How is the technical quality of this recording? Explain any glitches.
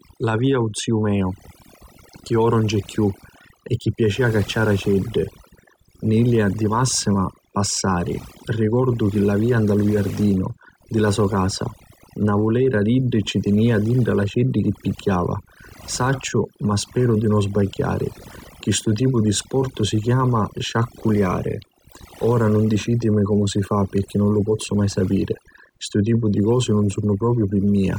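The recording is marred by one fault running the whole way through. The gaps between phrases drop and break up into twinkling specks. That is overdone noise removal: the denoiser, set too hard, shut down individual frequency bands close to its noise estimate, stripping quieter parts of the voice along with the background.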